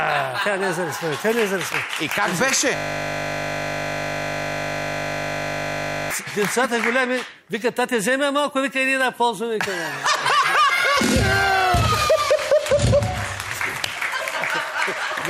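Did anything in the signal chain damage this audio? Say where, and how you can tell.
Yes. The damage is at the driver or buffer stage: a system hang loop from 2.76 s to 6.11 s. The sound stops progressing and is replaced by a steady buzz at 50 Hz, because one 20 ms slice of audio repeats exactly, about 167 times in a row. The host stalled and stopped refilling the output ring buffer, while the converter kept reading the same stale block until processing resumed.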